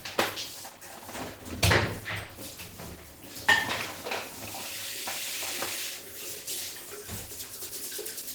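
Opus compression damage runs through the whole clip and is plainly audible. Tones sound rough, grainy and noisy rather than swirly. A hoarse, muffled edge fits the codec's hybrid speech mode, likely from a low rate around 16 kbps. Bandwidth still reaches 20.1 kHz.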